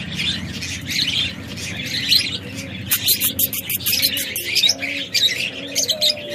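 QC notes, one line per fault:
1.17–4.01 s: doubled audio track, a copy about 5 dB quieter trails by roughly one second, likely a second capture path; abrupt, undecaying, unlike echo.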